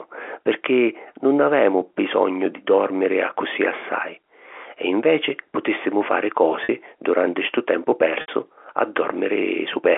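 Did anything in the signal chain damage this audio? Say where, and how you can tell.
Yes, packet loss on the network, concealed by pitch repetition: at 6.64 s after "e inveci putìssimu fari", and at 8.21 s after "duranti stu tempu". The receiver loops the last pitch period across 50 and 70 ms gaps, so you get a brief buzzy hold.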